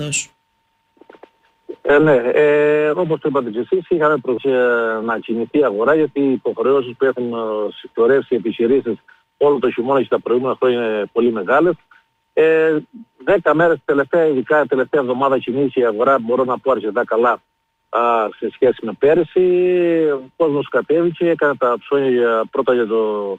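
The audio has a skip ahead at 4.37 s, where about 0.4 s is dropped and both sides are spliced almost directly, visible as an abrupt discontinuity in the waveform. At 4.94–5.23 s, jitter buffer speed-up trims short pitch-period pieces to run at 111% speed, shortening sounds in time on a spectrogram while pitch stays unchanged.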